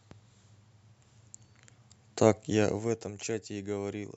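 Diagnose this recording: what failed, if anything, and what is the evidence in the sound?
A gain stage in the processing chain applied a level change in unsmoothed steps, causing zipper noise from 2.60 to 3.16 s. The speech falls roughly 10 dB in 2 dB jumps, about fifteen a second, each leaving a small click heard as ticking under the fade.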